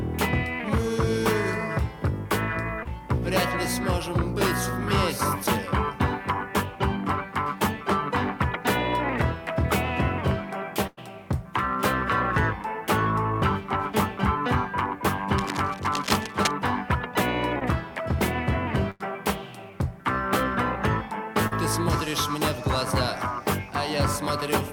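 The audio has two kinds of network dropout and one stretch of contact noise. Short concealed packet loss occurs at 2.83–2.87 s, 17.59–17.63 s and 21.47–21.53 s. Each time, a small piece of the stream arrived too late: about 20 ms at the first two points and about 40 ms at the third. The receiver patched the hole by extending the preceding sound before blending back in, so each one is heard as a tiny smear or wobble. On a spectrogram these show as a thin vertical seam where harmonics run unnaturally flat, or where the texture turns briefly to smooth noise. The waveform shows a short, over-regular stretch.

A burst of packet loss hits at 10.87–10.99 s and again at 18.91–19.02 s. Each time, about 100 ms of consecutive audio never arrived. The concealment held the last sound and faded it, so each gap is heard as a held buzz or a decaying hiss, then the audio jumps ahead with that portion gone. 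Visually, each appears as a band of frozen, fading spectral lines or a tapering envelope, ending in an abrupt restart.

From 15.38 to 16.51 s, cable scratch noise rides over the audio a little below its level. Its bursty, scratchy character points to a likely worn connector or cable being moved, with the contact resistance jumping about. On a spectrogram it appears as dense, ragged broadband speckle across that second. In the waveform it shows as irregular spiky clusters on top of the signal.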